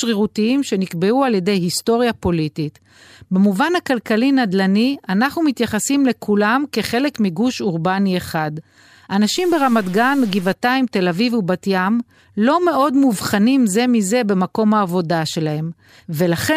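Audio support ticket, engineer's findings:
Likely stuck bit in the converter or a data line, 9.37 to 10.53 s. One bit held fixed, so about half the samples shift by its weight, a step of about -35 dBFS. Result: harsh, buzzy distortion over the speech, and the pauses fill with noise at roughly that level because the bit flips with the sign of small values.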